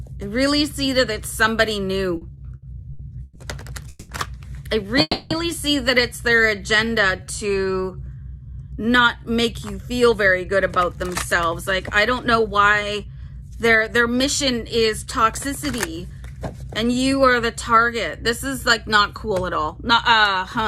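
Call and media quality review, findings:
Repeated stalls (stutter), 2.17–3.38 s: audio drags and catches across five short gaps, longest 120 ms, about 340 ms held over. Jitter buffer repeatedly running dry and receiver extending last sound.

Call audio freeze, 3.89–4.12 s and 5.01–5.33 s: sound hangs as a fading buzz for 200 ms, then 290 ms ending in brief silence, before resuming where it stopped. Likely jitter buffer underrun from held-up packets.

Jitter buffer slow-down, 6.43–8.51 s: sound stretched to 85% speed at unchanged pitch, about 310 ms added. Receiver repeating pitch periods to rebuild buffer reserve.

Jitter buffer speed-up, 9.82–16.19 s: hurried playback at 111% speed, same pitch, roughly 0.7 s trimmed. Receiver cutting pitch-period slices to shed excess buffered delay.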